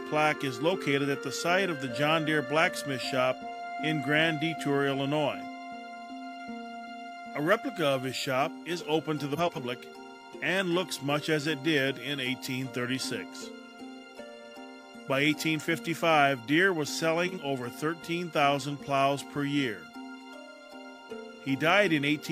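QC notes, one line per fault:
9.37 to 9.58 s, frames out of order. Two neighbouring blocks of about 93 ms, which fits two frames each, play swapped. The sound flutters and garbles. No time is lost.
17.27 to 17.38 s, frames out of order. Two blocks of about 46 ms, which fits one frame each, trade places. A brief garbled flutter results. The timing stays intact.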